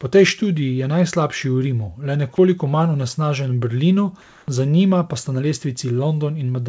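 Comfort noise in place of the background runs from 4.22 to 4.48 s, a stretch of about 260 ms. During this pause the real background, which sits about 31 dB below the loudest speech, gives way to a smooth, featureless hiss about 1 dB quieter. The likely cause is discontinuous transmission: with no speech detected, the sender stopped sending audio, and the receiver filled the gap with synthetic noise roughly matched to the background. The substitute, like everything on this call path, has nothing above 8 kHz.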